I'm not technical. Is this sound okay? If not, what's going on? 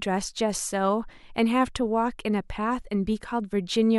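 Yes, nothing in this recording points to a technical problem with how the sound was captured or passed along.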